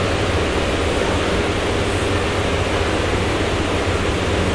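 From start to finish the clip plays with a wrong sample rate. Everything runs about 1.38 times too fast and sits about 5.5 semitones too high, so the sound is hurried and chipmunk-like. This fits audio captured at 16 kHz being played back at 22 kHz with no conversion. On a spectrogram every component shifts upward by that ratio, and the content ceiling rises from 8 kHz to about 11 kHz. The waveform looks squeezed in time.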